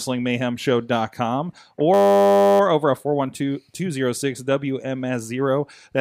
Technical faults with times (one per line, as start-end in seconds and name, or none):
1.94-2.60 system hang loop